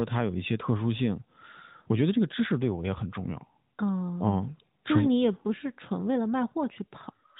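No technical faults can be heard in the speech. It has passed through the AMR narrowband mobile codec, so nothing above 4 kHz comes through, and the light coding damage points to its 12.2 kbps mode.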